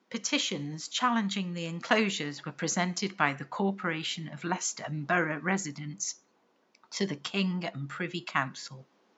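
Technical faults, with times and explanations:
No technical faults can be heard in the speech. A faint room noise sits about 39 dB below the speech, which is part of the recording rather than a fault of the system.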